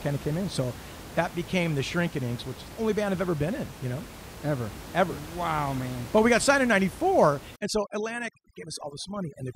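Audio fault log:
7.56–9.55 s overdone noise removal: the room noise, which sat about 16 dB below the speech, drops to near silence dotted with twinkling specks. The noise reducer is set too strong, cutting individual frequency bands whenever they come close to its noise estimate, and quiet speech detail goes with them. A noise gate would mute everything at once. Here the cuts flicker band by band, giving chirpy, musical residue.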